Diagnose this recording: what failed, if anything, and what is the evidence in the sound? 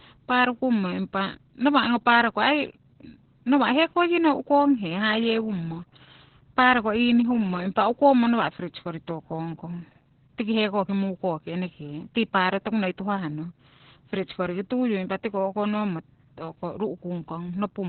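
Opus voice compression throughout, at the codec stage. Nothing sounds above 4.3 kHz. The speech is muffled and hoarse, which fits narrowband SILK near 8 kbps.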